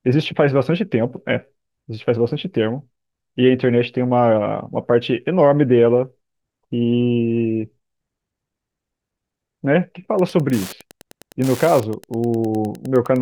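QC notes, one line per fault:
10.1 s to 13.2 s, Wi-Fi interference: a steady ticking enters under the speech and runs to the end, spaced 102.4 ms apart, just under ten ticks per second, sitting roughly 25 dB below the speech. A nearby Wi-Fi radio's beacon bursts are being rectified by the audio circuit, so each transmission becomes a click. Mains buzz is a continuous tone at 50 or 60 Hz or its harmonics. This is a pulse train at a fixed, much slower rate.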